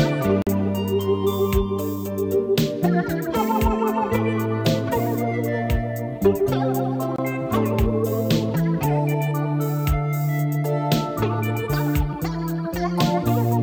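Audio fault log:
0.42–0.47 s and 7.16–7.19 s, Bluetooth dropout: the output drops to silence for 46 ms, then 23 ms, and resumes further along as if playback had continued. The gaps fit two lost packets and then one, likely arriving too late at the headphones.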